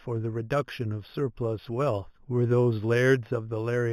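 Imaging from linear upsampling runs throughout this speech clip. The sound was raised to a higher rate by joining successive samples with straight lines, a weak interpolation filter. The band edge is dulled, and the first mirror image of the spectrum sits between 4 and 8 kHz, roughly 30 dB below the signal, which fits an 8 kHz original brought up to 48 kHz. That residue adds a faint metallic shimmer on sibilants.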